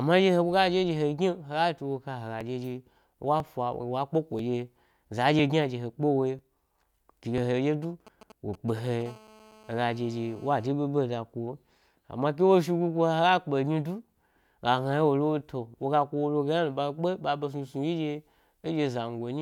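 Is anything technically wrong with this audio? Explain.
Yes, there are three separate problems, all in the first half or so of the speech.

From 2.41 to 7.38 s you get periodic USB or driver dropouts. Something is stalling the USB bus or audio driver roughly once a second (every 1.00 s), and each time around 4 ms of audio is skipped outright rather than filled with silence. That's about seven small regular ticks, audible only because there's speech running underneath.

Then from 7.83 to 9.03 s there are GSM signalling bursts. A 2G phone close by is signalling, sending short clumps of radio bursts at 217 Hz that the audio circuitry rectifies. You hear a galloping dit-dit-dit of brief buzzy bits, sitting about 20 dB below the speech.

Right after, from 9.06 to 10.68 s, it turns into full GSM phone buzz, just before "ɓeɓe da". The phone is now on a call, transmitting continuously at 217 bursts a second, and the rectified pulses come through as a steady, harsh, harmonic-rich 217 Hz rasp about 26 dB below the speech, with no relation to what's being said.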